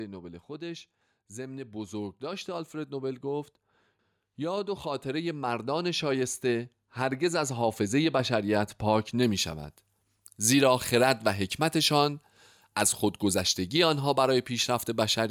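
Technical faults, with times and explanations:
0.46 to 3.53 s and 4.36 to 8.28 s: automatic gain rising. The gain control judged the speech too quiet and turned itself up slowly. Voice and background swell together, by about 6 dB in the first rise and about 8 dB in the second.
9.23 to 15.30 s: pre-emphasis left on. The treble was boosted for transmission, but the matching cut was never applied. The top end sits about 14 dB high at 10 kHz, which fits a 75 µs FM curve. The speech sounds thin, bright and hissy on sibilants.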